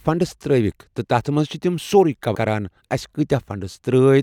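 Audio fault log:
2.34 s, compressed frames skipped. The speech jumps forward by roughly 150 ms. That span fits about seven whole frames of about 26 ms each, lost from the file or rejected by the decoder as damaged. The decoder carries on from the next good frame, so a piece of the speech simply never plays. The missing frames overlapped their neighbours, so the join sounds like a short smeared blip rather than a sharp click.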